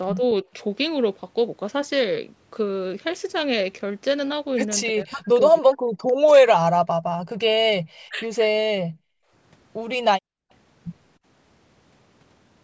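Speech suppressed in double talk appears three times, most likely because the echo canceller could not tell the near talker from loudspeaker echo while both sides spoke, and pulled everything down. At 0.16 to 0.22 s the dip is slight, a few decibels. From 4.9 to 6.79 s the speech is cut much harder, by about 40 dB at its deepest, dropping out in pieces for about a second and a half. The same deep cut returns from 7.98 to 8.42 s.

Background gated by the echo canceller follows twice. The canceller clamps the microphone hard while the loudspeaker is playing, so the room sound drops away by about 38 dB from 8.86 to 9.31 s and by about 40 dB from 10.2 to 10.5 s, then snaps back when the canceller releases. Across these gaps the sound is band-limited, with nothing above 8 kHz, as expected from call microphone processing.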